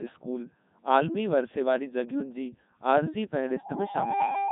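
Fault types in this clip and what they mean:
Codec 2 vocoder: The whole clip has that robotic, buzzy vocoder sound. Only pitch, voicing, energy and a rough spectral shape come through, and the decoder rebuilds the speech from sine waves. Damage is heavy, it fits the top 3.2 kbit/s mode, and nothing reaches above 3.9 kHz.
Loudspeaker feedback squeal: From 3.47 s to the end, an 810 Hz tone takes over. The mic is hearing its own loudspeaker, and at that one frequency the loop gain tops one. It swells over roughly 0.7 s until it sits about 10 dB above the speech.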